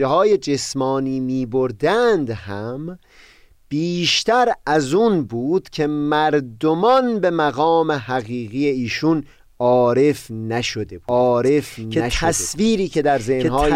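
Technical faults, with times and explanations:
11.09–13.75 s, doubled audio track: a second full-band copy of the speech abruptly joins and runs to the end, trailing the original by about one and a half seconds at roughly equal loudness, so two overlapping streams of the same speech compete with each other. There is no decay or room colour on it. A second capture through a slower path is the likely cause. On a spectrogram, identical harmonic patterns repeat at a fixed horizontal offset; the waveform shows a sudden rise in density at 11.09 s.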